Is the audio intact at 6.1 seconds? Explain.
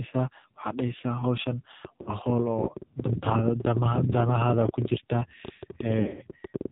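No. From 6.01 to 6.21 s the clip suffers lost AMR speech frames: about 120 ms of frames fail within a 160 ms stretch, the longest run 40 ms. The decoder repeats the last pitch and vocal-tract settings at falling gain, so the sound warbles and dips. The waveform shows brief sagging envelopes, and the spectrogram shows smeared, repeated harmonics.

A train of clicks also runs from 1.85 to 6.66 s, around seventy sharp, similar pulses at an uneven 12.3 per second, peaking about 10 dB above the sound, likely from electrical interference or a struggling interface. They appear as thin vertical lines on the spectrogram and as spikes on the waveform.

Underneath, the AMR narrowband mobile codec is heavily damaging the sound. It is buzzy and synthetic, consistent with a low rate near 5.9 kbps. The spectrogram shows nothing above 4 kHz.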